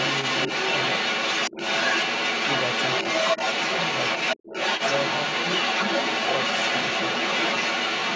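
From the very start right through to about 8.2 s there's the other side's voice leaking through underneath the talker, and it isn't faint either, sitting somewhat louder than the main speech, roughly 5 dB up. What's likely going on is that the talker's device is playing the far end out of a loudspeaker, the mic picks it up, and the echo canceller only takes part of it out, so that second voice rides along through the whole recording.

At 1.52 to 1.56 s the talker's own speech briefly sinks, by around 15 dB at the deepest point, for about 40 ms. That's speech suppressed in double talk, likely caused by both sides talking at once. The echo canceller can't separate the talker from the loudspeaker echo there, so it pulls everything down together and leaves a quick dip in the voice. The call's microphone processing is also audible in the band limit, with nothing above 8 kHz.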